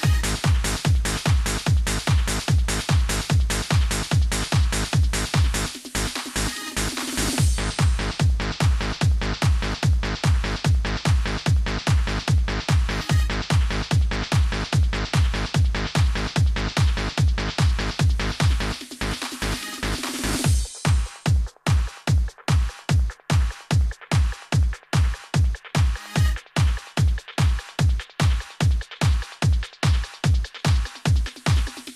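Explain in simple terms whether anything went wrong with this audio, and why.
Nothing went wrong here: no faults are present anywhere in the recording.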